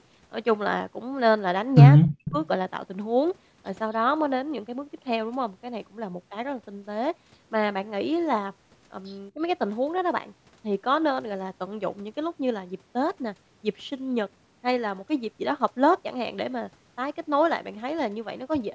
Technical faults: speech suppressed in double talk; echo leak

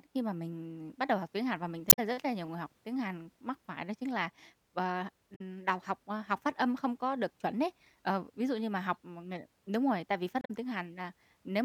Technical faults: damaged data in a compressed stream

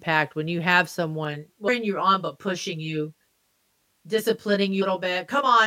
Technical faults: channel delay (comb filtering); damaged data in a compressed stream

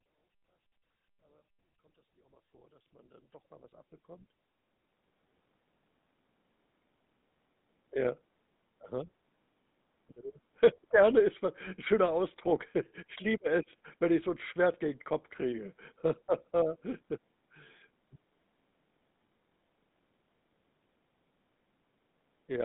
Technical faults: GSM full-rate codec

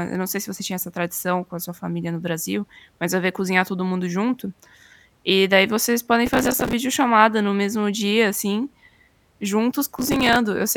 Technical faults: processor overload crackle

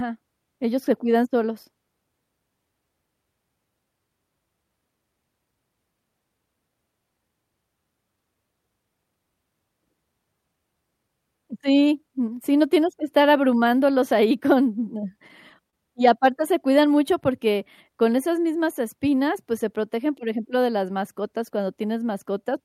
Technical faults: short stall from a late packet

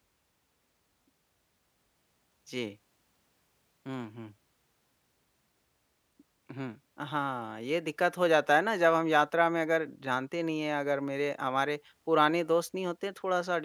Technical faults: none

